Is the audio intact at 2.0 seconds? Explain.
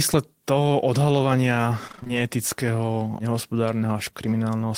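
No. From 1.87 to 2.11 s there is repeated packet loss (robotic sound): six short holes, each patched by continuing the preceding sound, give choppy speech with pieces missing rather than one clean dropout.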